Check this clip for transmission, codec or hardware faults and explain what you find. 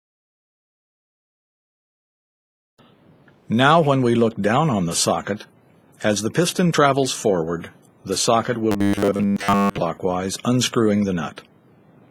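One transmission fault is present. From 8.72 to 9.78 s there is robotic sound from repeated short buffers: a rigid, metallic 100 Hz buzz. Late-arriving audio was likely concealed by looping a roughly 10 ms buffer, overwriting most of the real sound.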